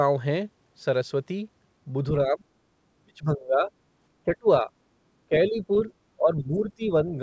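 Speech whose level repeatedly sags, at 2.25 to 2.47 s, 2.94 to 3.71 s, 4.25 to 4.7 s, 5.29 to 5.7 s and 6.17 to 7.08 s. The deepest fall is roughly 35 dB in the long second stretch, and the later ones are shallower. This pattern is likely speech suppressed in double talk, where the echo canceller, unable to tell the talker from loudspeaker echo while both sides spoke, turned everything down. A faint foreign fragment at 5.88 to 5.93 s, about 30 dB below the talker, is likely the other side's voice leaking through, residual loudspeaker sound the canceller failed to remove. Throughout, the band stops at 8 kHz, consistent with a G.722 call path.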